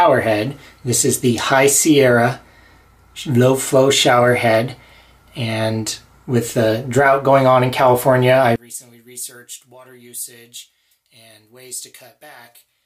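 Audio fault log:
8.56 to 12.86 s, one channel inverted: from 8.56 s to the end the sound drops sharply, about 22 dB quieter, as if the centre of the mix has been scooped out and only a faint residue remains. The likely cause is reversed polarity on one stereo channel, so that when the two channels are combined to mono, everything they share cancels, leaving only the small differences between them.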